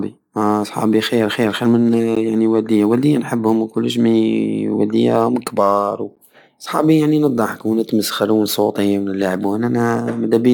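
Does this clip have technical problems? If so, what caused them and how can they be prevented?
Yes. Two gaps between stream segments cut the speech with hard-edged silences. One lasts 12 ms at 2.15 s, after "خير خير من صوت". The other lasts 13 ms at 6.15 s, after "مي والدية راهم كبار". They fall 4 s apart, at segment boundaries. The time stamps of adjacent segments don't meet, so the player fills each hole with silence. Making each segment's time stamps start exactly where the previous one ends prevents this.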